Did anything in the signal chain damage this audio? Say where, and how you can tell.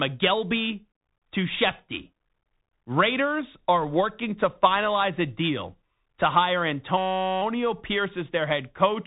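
Yes. At the codec stage, a Bluetooth CVSD headset codec runs throughout. The spectrogram is empty above 3.8 kHz, with granular hiss and scratchy, slope-overloaded sibilants from one-bit adaptive-step coding, fitting 64 kbit/s.

At the driver or buffer stage, a system hang loop follows "a deal to hire", from 6.98 to 7.42 s. A 5.33 ms fragment repeats as a 188 Hz buzz. The waveform shows identical cycles, the spectrogram a harmonic comb. This fits a 256-sample buffer.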